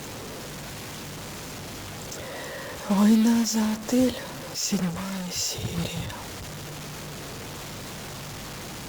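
A data line or converter bit that is likely stuck at a fixed value runs under the whole of this speech recording, a stuck bit fault. Every sample whose true value disagrees with that bit lands off by a step of roughly 30 dB below full scale, so the speech carries a harsh, buzzy distortion from start to finish. Because the bit also flips with the sign of quiet samples, the pauses fill with a steady hiss-like noise instead of silence.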